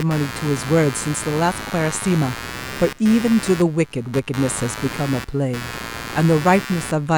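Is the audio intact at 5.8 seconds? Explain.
No. At 5.8 s, as throughout the clip, computer activity noise sits under the speech: a buzzing pulse at roughly 100 per second, fairly loud, only about 10 dB below the speech. Processor or peripheral load shifts the shared audio ground, injecting interference unrelated to the speech.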